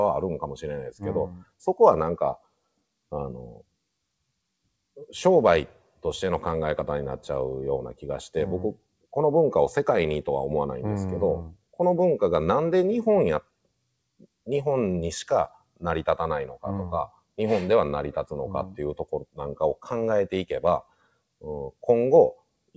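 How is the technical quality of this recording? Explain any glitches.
The recording is marred by a noise suppressor that treats the sound itself as noise. Nothing reaches above 8 kHz, which fits a G.722 call path at 64 kbps.

For the whole clip, the level wavers by a few decibels, and held sounds and tails thin out while attacks mostly come through. This is a noise suppressor applied to music or sounds. A processor tuned for speech mistakes steady tones and decaying ambience for background noise and keeps pulling them down, producing a restless, slightly pumping texture.

At six moments the sound cut by the noise suppressor drops sharply, as if briefly swallowed: 1.34 to 1.52 s (about 16 dB), 2.38 to 2.59 s (about 19 dB), 15.56 to 15.84 s (about 18 dB), 16.48 to 16.64 s (about 15 dB), 17.07 to 17.31 s (about 19 dB) and 20.83 to 21.18 s (about 17 dB). Each lasts roughly 150 to 300 ms. The suppressor judged these stretches to be noise and attenuated them far harder than the surrounding material, leaving short hollow dips.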